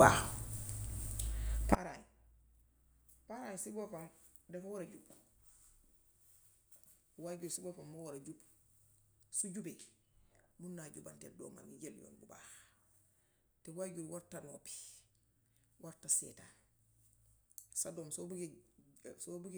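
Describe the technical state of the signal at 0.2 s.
At 0.2 s the speech signal is intact, with no technical fault audible at that moment.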